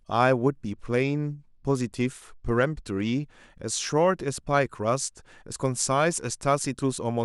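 From 0.64 s to 3.24 s the speech goes through a Bluetooth SBC bit pool drop. The sending device appears to have cut the SBC bit pool from about 31 to 14 under link pressure. That leaves roughly 99 kbps. The upper sub-bands get almost no bits, so the treble dulls. The remaining bands are quantised coarsely, and a gritty noise rides on the speech. At 3.24 s the bit rate recovers and the clarity returns.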